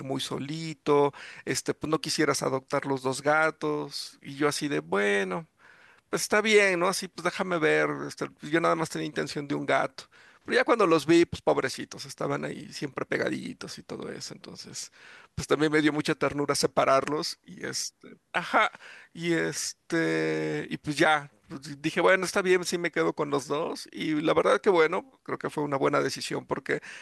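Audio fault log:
No technical faults are present, and the speech signal holds steady and intact for its whole duration.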